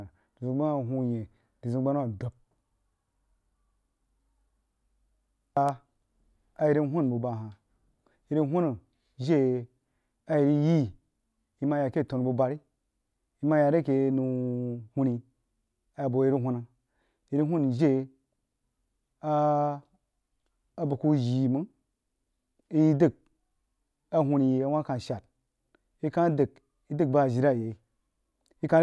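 Nothing in the speech stood out as a technical problem on listening.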